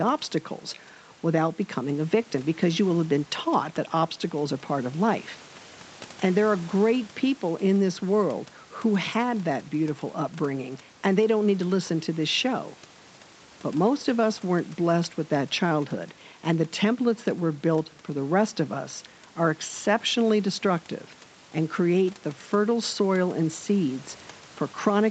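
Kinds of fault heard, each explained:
No faults heard.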